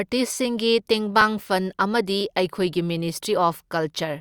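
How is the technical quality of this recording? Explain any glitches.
The speech has three small glitches from overlap between stream segments, at 1.21, 2.21 and 3.20 s. Segment time stamps overlapped, so the player cut 13 to 16 ms of real sound, causing a brief click or skip once a second.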